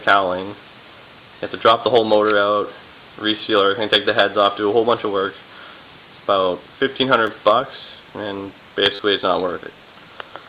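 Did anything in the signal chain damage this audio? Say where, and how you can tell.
Yes, a repeated buffer at the driver or buffer stage. Clicks at 3.39 s and 7.27 s and a brief buzz from 8.95 to 8.99 s fit a 10 ms buffer replayed when new audio arrived late. Unlike a dropout, there's no silence, only identical repeats with hard joins.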